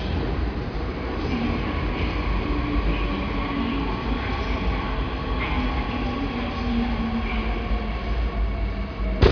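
No technical faults can be heard anywhere in the audio, which stays intact and continuous throughout.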